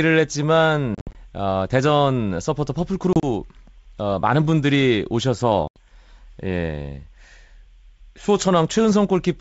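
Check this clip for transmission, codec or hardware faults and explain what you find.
Yes, there is a transmission fault: three bursts of packet loss on what sounds like a G.722 wideband call.

Packet loss on an ADPCM call occurs at 0.95–1.20 s (about 130 ms missing, in gaps up to 60 ms), 3.13–3.24 s (about 60 ms, gaps up to 30 ms) and 5.68–5.79 s (about 80 ms). Silence fills the holes, and the decoder's predictor and step size lose sync, so speech resumes slightly distorted before settling.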